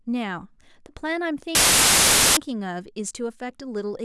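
A speech clip interrupted from 1.55 to 2.37 s by file tags played as audio: an embedded cover picture's compressed data decoded as samples, giving very loud white noise with abrupt edges. Unlike a noisy dropout or clipping, it carries no trace of the underlying sound.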